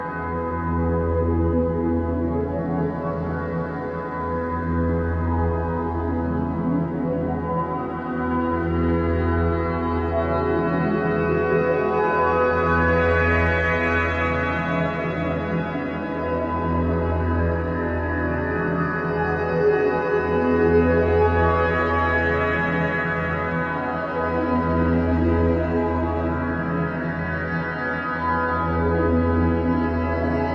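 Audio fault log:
No technical faults can be heard anywhere in the signal; it stays steady and continuous throughout.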